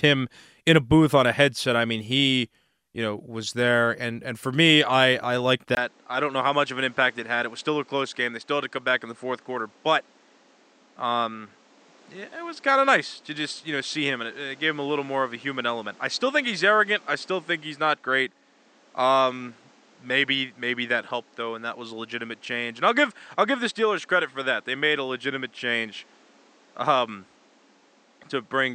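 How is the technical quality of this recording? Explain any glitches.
The recording has one clear fault, an input switched to a poorer device, at 5.75 s, just after "me I I liked", lasting to the end. After a brief gap of about 20 ms, the audio turns duller and a few decibels quieter, with new background noise about 30 dB below the speech. The likely cause is the system moving to another microphone or headset profile with a narrower band. A spectrogram would show energy stopping abruptly near 8.7 kHz, while the waveform would show a thin gap, then lower peaks.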